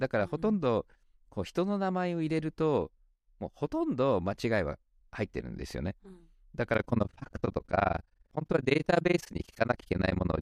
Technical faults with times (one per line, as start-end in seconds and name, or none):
6.74-10.41 overlap-add ripple